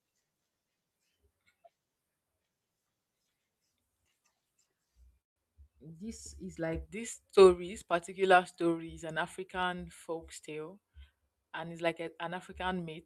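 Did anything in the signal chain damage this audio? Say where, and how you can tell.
Yes. At 5.21 to 5.38 s the speech stops for about 140 ms, then resumes where it left off, with nothing lost. This is a call audio freeze, likely from delayed network packets draining the jitter buffer. A spectrogram shows a blank vertical band, and the waveform shows a flat gap.

From 11.21 to 11.69 s the speech runs at about 112% speed with unchanged pitch, and roughly 70 ms is cut. This is jitter buffer speed-up. The receiver's buffer trimmed repeated pitch periods to shed excess delay. A spectrogram shows compressed syllable spacing while harmonic spacing holds steady.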